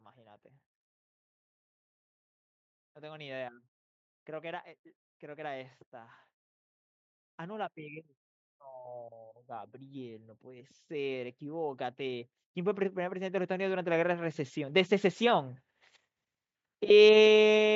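Speech clip with two faults. From 9.71 to 15.54 s, automatic gain rising lifts voice and background together by about 12 dB, a slow swell as the gain control compensates for quiet input. At 16.89 to 16.91 s, lost LE Audio frames leave a brief noisy smear where the LC3 decoder filled about 15 ms with a sign-randomised repeat of the previous spectrum, which fits two lost 7.5 ms frames. The band stops at 8 kHz, consistent with call microphone processing.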